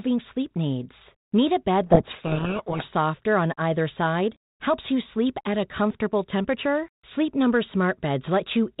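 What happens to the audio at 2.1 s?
At 2.1 s the speech falls into a codec payload misread, running from 1.86 to 2.85 s, between "a bed" and "on either side". The G.726 code words are read with their bits in the wrong order. The speech is buried in harsh distortion.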